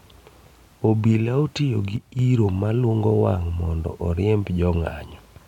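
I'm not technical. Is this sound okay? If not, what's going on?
No. From 1.96 to 2.19 seconds, the speech suddenly gets noticeably quieter for about a quarter of a second, then jumps back to normal. This is a case of one channel dropping out. The recording likely has a left and a right side, and one side briefly went silent. When both sides are played together, losing one roughly halves the signal level.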